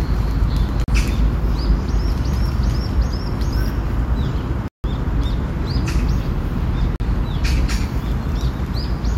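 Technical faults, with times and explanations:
0.84 to 7.0 s, block of digital silence: At 0.84, 4.68 and 6.96 s, runs of output samples were written as zeros instead of audio, for 40, 160 and 40 ms respectively. The sound drops straight to digital silence and returns with no fade. The two 40 ms gaps come across as brief dropouts, while the 160 ms one at 4.68 s is a longer hole.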